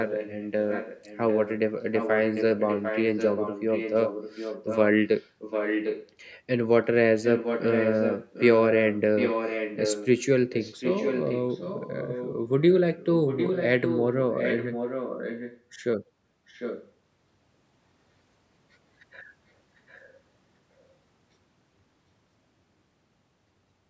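Speech, band-limited to 8 kHz by call microphone processing, is shadowed by a delayed second copy about 0.75 s behind it, at 0.06–1.59, 1.92–4.79, 5.17–6.11, 7.22–10.08, 10.52–15.61, 16.48–16.92 and 19.89–19.99 s. It is loudest from 5.17 to 15.61 s, fainter elsewhere, and barely audible at the end. This is echo leak, likely from a far-end loudspeaker whose echo canceller let the picked-up sound return.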